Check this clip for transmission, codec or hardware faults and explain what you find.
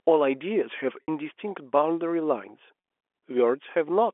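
Two brief dropouts in this speech appear as packet loss with pitch repetition, heard at 1.03 to 1.08 s and at 2.80 to 2.84 s, over a telephone-band G.711 line. Audio went missing for about 60 ms and then 40 ms, which fits three and two lost 20 ms packets. The receiver looped the last pitch cycle to fill each gap, so each sounds like a held, slightly buzzy note.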